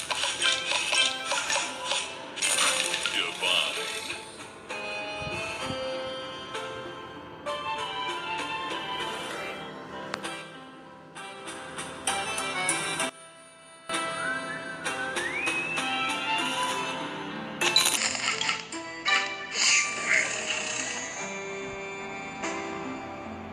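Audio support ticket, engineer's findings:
One channel inverted, 13.09 to 13.89 s. Level collapses by about 18 dB for 0.8 s; centre content and low end nearly gone, leaving a faint residue. Likely polarity flip on one stereo leg at mono fold-down. Shared signal cancels, and only the channel difference survives. Check the summing stage or the channel wiring and its phase setting for that span.

Section at the wrong speed, 17.97 s to end of clip. Playback slowed to 0.75x, with pitch dropping by roughly five semitones in step, so the audio turns deep and drawn-out. Speed and pitch move together, with no independent pitch shift. Likely clock mismatch in the editor or player, with material rendered against the wrong rate reference. Verify the sample-rate setting on the segment and its resampling path.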